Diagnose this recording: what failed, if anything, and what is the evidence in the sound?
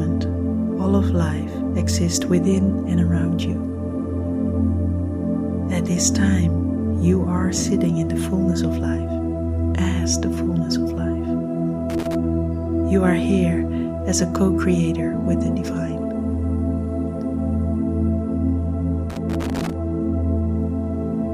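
Irregular bursts of crackle and scratching break through the sound from 11.90 to 12.15 s and again from 19.10 to 19.73 s. This is loose connector crackle in the analogue wiring: a worn or dirty contact rapidly makes and breaks, chopping the signal, and any DC on the line adds pops.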